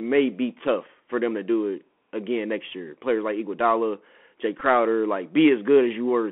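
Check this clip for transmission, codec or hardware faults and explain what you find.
Two faults are present: narrowband Bluetooth headset coding across the whole clip, and one brief packet repeat.

Throughout, the audio passed through the Bluetooth CVSD headset codec, which encodes each sample as a single up-or-down bit with an adapting step. The band sits at roughly 200 Hz to 3.4 kHz, fitting a 64 kbps link. S sounds turn scratchy and a granular hiss sits underneath.

At 4.60 s, a Bluetooth headset packet was repeated. Packets were lost and the chip replayed the previous packet's bits, covering about 11 ms, which fits three lost packets. Repeating every 3.75 ms, the replay produces a short buzzy tick near 267 Hz before good packets return.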